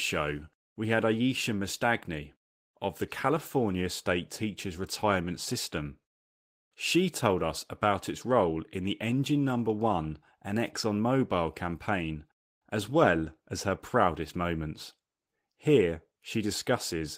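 No technical faults can be heard anywhere in the recording.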